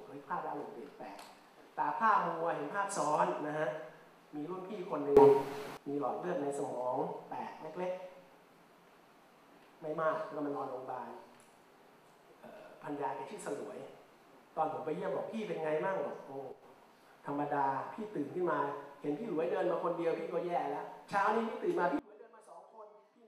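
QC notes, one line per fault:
5.17–5.77 s, sudden gain jump: the digital gain likely stepped from one sample to the next with no ramp, so sound and background noise leap up together by about 16 dB.
16.52–16.63 s, sudden gain jump: a brief, likely unramped cut of about 6 dB drops the whole signal, noise floor included.
21.99 s to end, sudden gain jump: an abrupt fall of about 22 dB leaves everything, background too, far quieter to the close.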